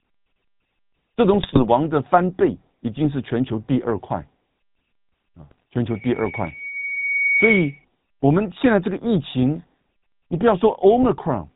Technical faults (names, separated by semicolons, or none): GSM full-rate codec; GSM bit errors; loudspeaker feedback squeal